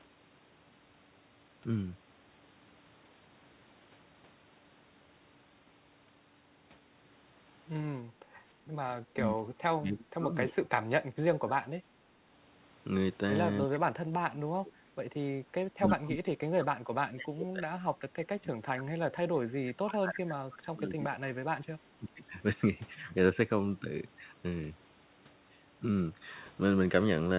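From 8.10 to 8.41 s the echo canceller clamped the microphone while the loudspeaker played; this background gating drops the room sound by about 9 dB for roughly 0.3 s before it returns. Speech suppressed in double talk, likely from the canceller turning down both sides at once, makes the speech dip or break up by around 30 dB from 9.12 to 11.64 s, about 35 dB from 13.65 to 15.11 s and about 30 dB from 15.67 to 22.21 s. Within those stretches, echo leak, likely from residual loudspeaker pickup, adds brief 306 ms delayed scraps at 13.70 to 13.78 s (about 20 dB down), 15.88 to 15.93 s (about 10 dB down) and 18.18 to 18.25 s (about 20 dB down).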